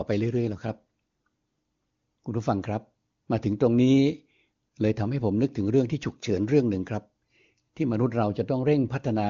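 No technical faults can be heard anywhere in this speech. It has the sound of the AMR wideband (HD Voice) codec at what seems to be its highest rate, with little or no coding damage audible and nothing above about 7.2 kHz.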